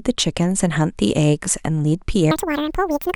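From 2.31 s to the end, the speech is read two samples at a time (double speed). The reader treats each pair of samples as one frame. Playback runs twice as fast and a full octave higher, 12 semitones up.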